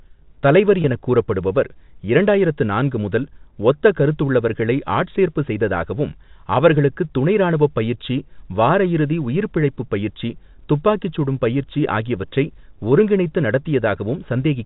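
From 0.82 to 0.84 s, just before "எனக் கூறப்படுபவர் இரண்டாயிரத்து நான்கு", packet loss with pitch repetition, consistent with one 20 ms packet, is bridged by repeating the last pitch period, giving a brief held, buzzy tone over the G.711 telephone band.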